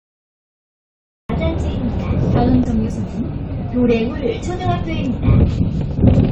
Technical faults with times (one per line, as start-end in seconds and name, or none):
0.00-1.29 cut-off start
2.64-4.97 call bitrate drop